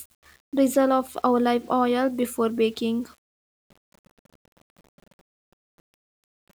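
Throughout, the speech carries a grainy, signal-following grit, worst in quiet passages: low bit depth without dither, likely 8-bit rounding, leaving noise only about 35 dB down.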